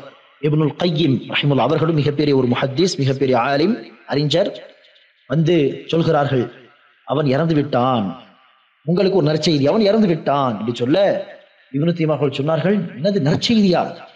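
No technical faults can be heard anywhere in the audio.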